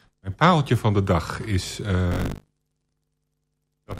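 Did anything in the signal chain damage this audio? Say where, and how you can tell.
Yes. The damage is at the driver or buffer stage: buffer tearing starts at 2.1 s, right after "van de dag is", and continues to the end of the clip. The speech picks up a rattling, robotic buzz at 50 Hz, which fits a 20 ms buffer period. The writing program and the hardware read pointer have slipped, so about a third of each period replays audio from one lap earlier, roughly 70 ms old, with hard joins on both sides.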